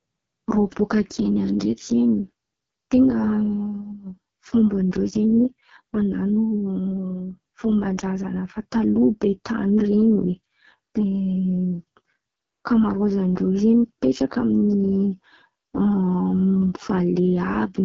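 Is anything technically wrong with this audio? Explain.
Yes. Throughout the clip the speech carries heavy AMR wideband (HD Voice) codec damage. The codec models the lower band, up to 6.4 kHz, as pulse excitation driving a vocal tract filter, and substitutes shaped noise for the band above it. Here the pulse coding is very coarse, which fits the lowest AMR-WB rate of 6.6 kbit/s, so voiced sounds come out rough and raspy. Nothing is present above 7.3 kHz, giving a band-limited top end.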